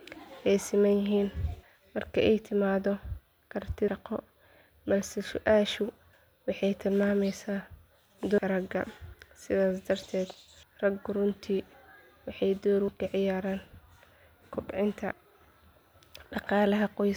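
At 3.88, 6.13, 8.38, 10.63 and 12.88 s, roughly 300 ms of speech just vanishes and the edges butt together, just before "waxay tilmaamaysaa", "raggu runtii", and between "waxay door" and "ka ciyaaraan". That regular spacing is likely audio missing between chunks of about 2.5 s.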